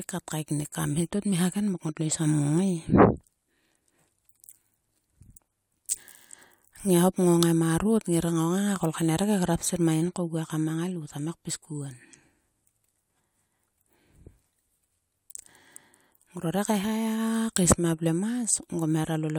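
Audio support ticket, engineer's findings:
Findings: no audible fault in the speech clip, nothing to report.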